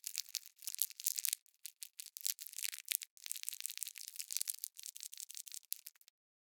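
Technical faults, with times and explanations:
0.34–0.51 s repeated buffer: a 0.17 s piece of sound plays twice with a hard join, a brief stutter. Late audio forced a replay, consistent with an 8192-sample buffer.
1.71–2.05 s repeated buffer: the same 0.17 s piece sounds three times, each join abrupt. New audio arrived late twice running, and about 0.3 s of sound went missing.
3.41–3.93 s repeated buffer: a longer stutter as one 0.17 s piece plays four times over. Three missed deliveries replaced about half a second of audio.
4.95–5.63 s repeated buffer: the longest stutter, one 0.17 s piece heard five times with hard joins. Four late buffers in a row cost roughly 0.7 s of sound.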